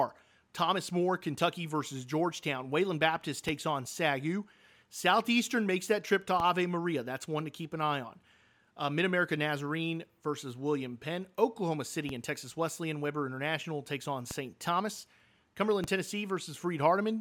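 Five DC steps turn up in this speech, at 3.49, 6.40, 12.09, 14.31 and 15.84 s. Each time, the waveform's zero line suddenly jumps to a new offset, and you hear a short, low thump or click while the talking carries on untouched. The offset doesn't stay put: it dies away, the way a roughly 20 Hz high-pass would bleed it off, so each thump fades out instead of leaving a lasting shift.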